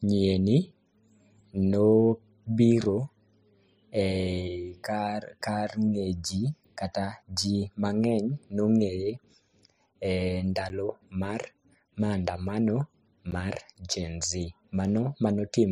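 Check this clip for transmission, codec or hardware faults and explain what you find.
Two short dropouts occur in this speech clip, both of the same kind: a block of digital silence at 10.69 s and again at 13.31 s, the second just before "mar gen". Each block is 10 ms long. The output buffer was most likely not filled in time, so the samples were replaced by zeros. The signal drops to silence and returns with no fade. At this length each event is heard as a tick or dip rather than an audible gap.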